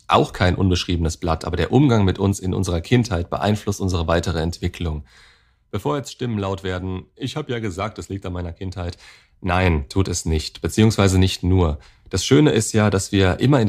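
Speech, with zipper noise from 8.8 to 9.8 s, where the level changes by about 10 dB in coarse, unsmoothed steps at around 30 per second. Each step leaves a tiny click, so a ticking buzz rides on the voice. On a waveform the envelope moves like a staircase, and a spectrogram shows faint vertical broadband lines, one at each step.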